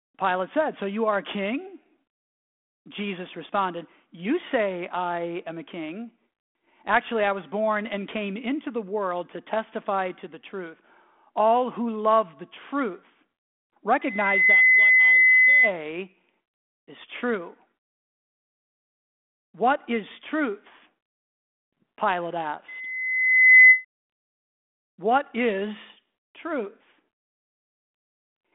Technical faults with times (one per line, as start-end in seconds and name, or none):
14.01-15.74 loudspeaker feedback squeal